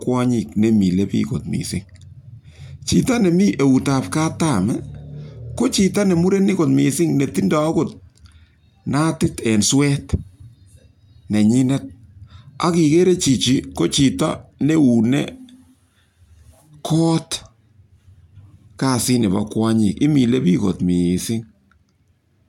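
No technical faults can be heard anywhere in the recording.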